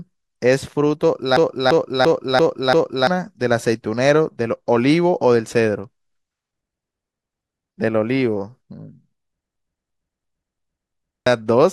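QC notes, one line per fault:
1.37–3.07 s, system hang loop: the system froze while the hardware kept replaying one 341 ms buffer, fitting 16384 samples, so speech stutters five times at 2.93 Hz, losing about one and a half seconds.
9.56–11.26 s, system hang loop: the same freeze recurs, cycling a 341 ms buffer five times at 2.93 Hz, giving a repeating speech stutter and dropping roughly one and a half seconds of audio.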